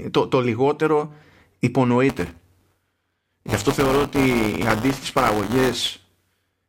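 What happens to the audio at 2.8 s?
At 2.8 s the speech is inside a stretch of buffer tearing that runs from 2.09 s to the end of the clip. The writer and reader of the audio buffer have drifted so they cross every period, leaving a small slice of each buffer, around a tenth, filled with audio about 10 ms stale. The hard joins produce a steady robotic buzz at 172 Hz, which fits a 256-sample buffer. Unlike random crackle or dropouts, it is strictly periodic and disappears in silent gaps.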